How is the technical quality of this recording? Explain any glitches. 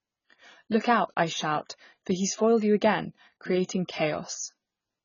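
The quality is poor. Heavy AAC compression damage runs through the whole recording. Nothing comes through above 7 kHz, so the speech sounds dull and muffled. Sibilants are smeared and fizzy. Sustained sounds carry a warble. The likely cause is AAC-LC encoding at a very low bitrate, and the damage fits a rate near 16 kbps. At that rate the encoder cuts the top band. It leaves gaps in the spectrum, or fills them with substitute noise.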